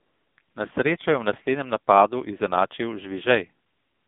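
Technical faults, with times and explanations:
Throughout, AMR narrowband mobile codec: speech confined to roughly 150 Hz to 3.7 kHz, heavily buzzy and synthetic, fitting a low bitrate near 6.7 kbps.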